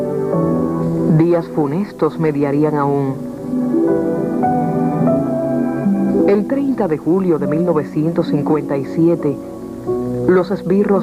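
No technical faults can be heard anywhere in this clip.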